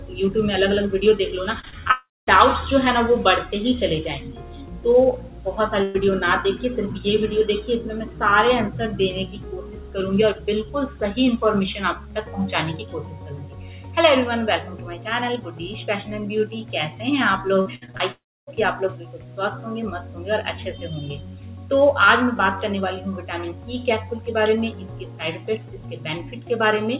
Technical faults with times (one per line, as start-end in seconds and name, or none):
1.60-1.91 repeated packet loss (robotic sound)
1.91-2.29 long network dropout
5.83-5.96 burst of packet loss
17.61-18.02 repeated packet loss (robotic sound)
18.12-18.49 long network dropout